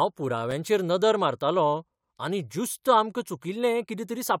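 At 0.51 s, before "नदर मारतालों आनी ज्युस्त", a 5.8 ms block of digital silence cuts in. That fits a 256-sample buffer not filled in time. It sounds as a tick.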